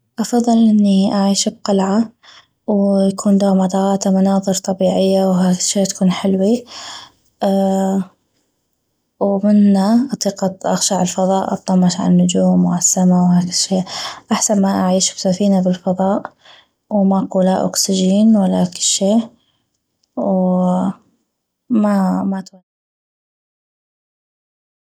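No technical faults are present in the speech signal, and the smooth fade-out that begins at around 22 s and is complete by 22.63 s is an ordinary editorial fade with no click or hard edge.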